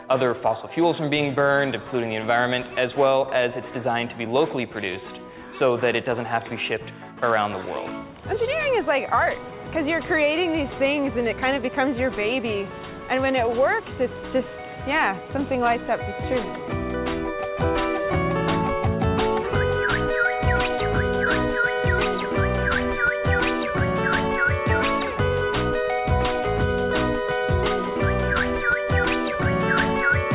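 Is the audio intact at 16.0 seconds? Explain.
Yes, at 16.0 seconds the audio is intact: it carries only the narrow telephone-band sound of the call path, with nothing above 4 kHz, and no fault.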